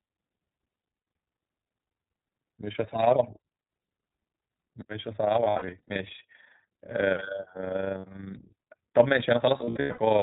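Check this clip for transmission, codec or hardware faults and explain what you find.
Three faults are present: a frame-rate ripple, iLBC codec damage, and several bursts of lost iLBC frames.

Overlap-add ripple runs through the whole clip. The sound was split into windowed frames and rejoined with overlaps that do not sum to a steady gain. The level swings by about 6 dB around 30 times a second. That gives a rough, fluttering tremolo.

The iLBC codec is also present throughout, and its damage is plainly audible. Nothing above 4 kHz survives, so the speech is narrowband. It sounds clear but rough and slightly synthetic. The coarseness points to the 15.2 kbps mode with 20 ms frames.

Lost iLBC frames occur at 0.70 to 1.06 s, 5.44 to 5.97 s, 7.98 to 8.05 s and 9.58 to 10.00 s. The decoder fills each gap by repeating the last pitch cycle mixed with noise. This is heard as short buzzy, held vowels. 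About 200 to 280 ms goes missing in each longer burst, and the longest single run is around a tenth of a second. The speech recovers almost immediately after each gap.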